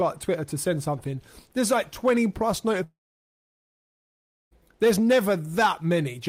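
At 2.83 s the audio breaks off and does not properly resume until 4.53 s, a gap of about 1.7 s. The final sound before the break is briefly extended as a decaying buzz or hiss, then gives way to silence lasting roughly 1.55 s. When audio returns, it picks up further along, with about 1.68 s of material simply absent. This pattern is consistent with a long network dropout, likely caused by packets failing to arrive and the receiver's concealment running out.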